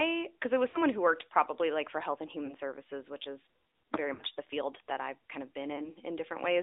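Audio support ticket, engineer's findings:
Narrowband, buzzy, synthetic-sounding speech throughout, with the band limited to roughly 250 Hz to 3.7 kHz and nothing audible above it. Codec damage is plainly audible. Component: AMR narrowband mobile codec (AMR-NB). Mechanism: 8 kHz sampling, with the vocal tract modelled and driven by sparse pulses per subframe. The buzz level fits a mid-rate mode around 10.2 kbps, so fine detail is lost to the pulse model.

Brief dips and warbles at 0.70–0.79 s, 2.46–2.54 s, 4.14–4.23 s and 5.76–5.89 s, each followed by a weak, rough onset. The 4.14 s event loses the most frames. Component: lost AMR speech frames. Mechanism: frames failed their checksum, so the decoder repeated the last good pitch and vocal tract settings at falling gain. The gaps fit about 40, 20, 60 and 20 ms of lost audio.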